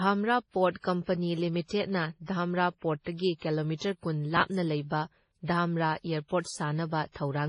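From start to finish the speech sounds smeared and a bit swirly, with nothing above 10.4 kHz. That mix of artefacts likely comes from transcoding between lossy codecs: a low-rate MP3 stage, something like 24 kbit/s, re-encoded to WMA at around 64 kbit/s, with the MP3's low cut-off carried through.

At 4.37 to 4.41 s, right after "ꯙꯥꯝꯔꯥ ꯄꯣꯔ꯭ꯠꯇꯒꯤ ꯀꯤꯂꯣꯃꯤꯇꯔ ꯀꯨꯟ" and before "ꯂꯩꯕ ꯙꯥꯝꯔꯥ", there's a brief jumbled stutter. That's chunks out of order: a 10 ms chunk shows up late, which fits it slipping back about three chunks, leaving hard joins around it.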